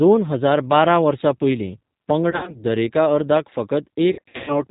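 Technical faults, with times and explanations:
Throughout, G.729 codec: the speech is band-limited with nothing above 4 kHz and has a plainly audible rough, slightly synthetic texture. At 8 kbit/s each 10 ms frame is rebuilt from a vocal tract filter, a pitch predictor and a few pulses, so finer detail is lost.
2.31 to 2.64 s, VoIP packet loss concealed by the speech codec: about 100 ms of audio goes missing in gaps spread over roughly 160 ms, the longest run 60 ms. The decoder stretches its last pitch and filter into a fading extrapolated sound, and the speech stays weak briefly afterwards.
4.12 to 4.62 s, VoIP packet loss concealed by the speech codec: a heavier burst, about 280 ms lost across roughly 380 ms with a longest run of 120 ms. The extrapolated sound decays, and because each frame builds on the previous one, distortion lingers as packets return.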